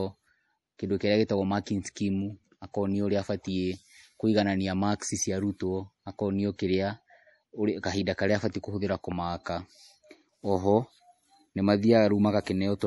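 Throughout the speech, nothing is present above 11.5 kHz, and the sibilants have a watery, swirling edge, likely from MP3 compression at a low bitrate around 48 kbps. The starved encoder cut the treble and dropped weak lines, so a spectrogram shows a hard ceiling with flickering holes beneath it.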